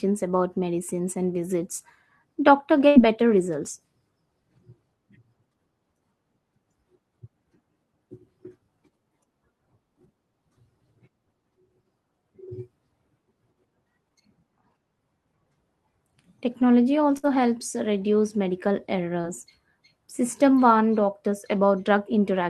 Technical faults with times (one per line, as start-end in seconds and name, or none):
2.87-2.97 burst of packet loss
17.17-17.25 burst of packet loss
19.21-19.25 short concealed packet loss